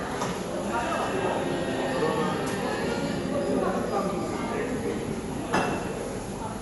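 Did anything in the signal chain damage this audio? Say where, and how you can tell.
Yes, at the codec stage, and it runs through the whole clip. Nothing comes through above 11.5 kHz, so the top end sounds dull, and there's a rough, fluttery hiss around anything tonal. That combination likely comes from Dolby Digital compression at a low bitrate, something like 64 kbps. Short of bits, the encoder narrowed the band and starved many frequency lines of detail, and the decoder filled those gaps with dither noise.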